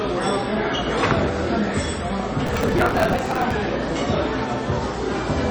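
An everyday-sound recording with a watery, swirly texture from start to finish and nothing above 8.3 kHz. That points most likely to MP3 compression at a low bitrate, around 32 kbps. On a spectrogram this appears as a flat ceiling at 8.3 kHz, with weak components blinking on and off in patches below it. From 2.46 to 3.52 s there is processor overload crackle: the processor keeps missing its deadlines, so short chunks of roughly 5 ms are skipped and the sound tears into a gritty burst. The waveform shows many tiny hard-edged gaps across that stretch, and the spectrogram shows dense vertical broadband streaks.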